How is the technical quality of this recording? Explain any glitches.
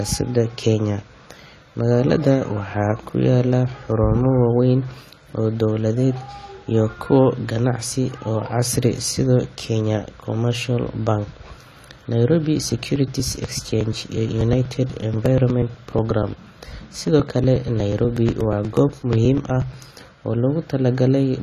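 The recording is clearly compromised, with dulled, smeared speech throughout and a stretch of regular ticking in the second half.

AAC compression, likely at a low bitrate around 32 kbps, runs the whole clip. It leaves a plainly audible warbly, fizzy smear, and a spectrogram shows nothing above 14 kHz.

Periodic USB or driver dropouts run from 12.72 to 19.98 s. Every 0.121 s roughly 4 ms of audio is skipped, producing about seventy evenly spaced ticks, seen as small waveform discontinuities.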